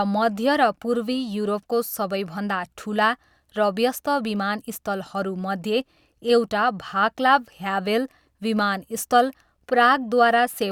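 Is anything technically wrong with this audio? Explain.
No, nothing technically wrong can be heard here.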